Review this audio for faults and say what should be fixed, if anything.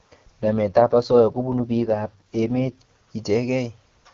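An AMR rate drop runs from 0.42 to 2.78 s. The speech turns rough and synthetic with no gap and no band change, which fits the codec stepping down from its 23.85 kbit/s mode to 6.6 kbit/s to spend bits on error protection, then recovering. Improve radio coverage or link quality so the network has no need to lower the rate.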